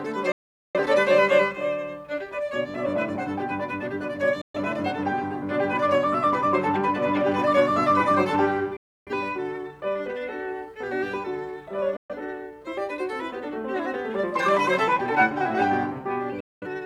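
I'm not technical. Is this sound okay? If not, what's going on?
No. The music has a digital broadcast dropout five times: 0.32–0.79 s, 4.41–4.59 s, 8.77–9.12 s, 11.97–12.15 s and 16.40–16.67 s. The receiver lost the signal and muted, fading in about 3 ms to clean silence. Unlike a crackly connection, there's no noise, and the music resumes further along, so those bits are gone.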